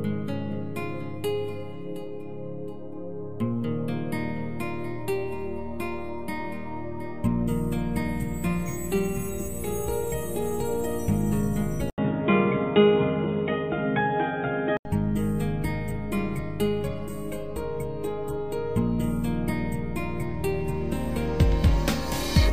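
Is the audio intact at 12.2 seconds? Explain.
No. At 12.2 seconds the audio sits inside a stretch from 11.90 to 14.85 s where the input likely switched to a poorer device. An 80 ms silence marks the change. After it, nothing above 3.8 kHz comes through, so the sound turns dull and boxy. The level shifts by a few decibels. A new, faint background noise also appears, far below the signal. The narrower band belongs to the other input.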